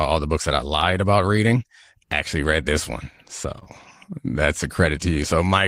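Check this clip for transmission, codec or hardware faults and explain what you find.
The speech has one transmission fault: short concealed packet loss, hit twice in a row just after "read this one" and before "that's a". From 3.59 to 3.63 s and again from 3.63 to 3.67 s, two consecutive packets, about 20 ms each, arrived too late. The decoder stretched the preceding sound forward and faded back into real audio, leaving a brief smear or wobble rather than silence. That filled-in blur, not a clean gap or hard click, distinguishes it from a dropout.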